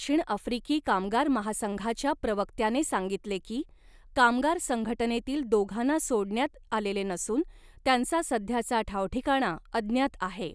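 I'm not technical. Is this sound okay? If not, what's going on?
Yes, this recording sounds fine, and nothing in it points to a technical problem.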